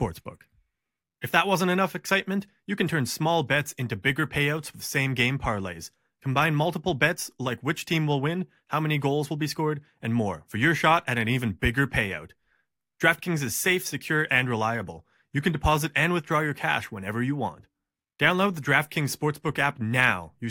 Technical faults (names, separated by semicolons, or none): none